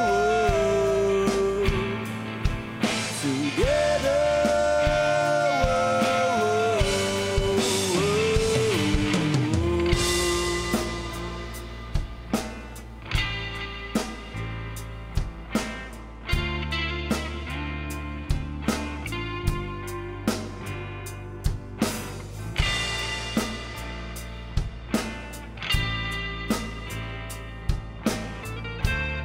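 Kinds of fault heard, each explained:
No technical faults are audible anywhere in the audio.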